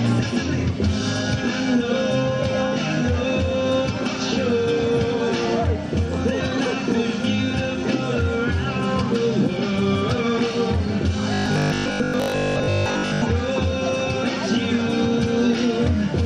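At 11.34 s the sound turns into a rigid, metallic buzz that lasts until 13.22 s. That's robotic sound from repeated short buffers: the buzz sits at a fixed 50 Hz, which fits a 20 ms chunk being looped over and over. The likely cause is fresh audio arriving too rarely, so playback keeps repeating the last short buffer. For most of that stretch you're hearing repeats rather than new material, so the real content is skipped.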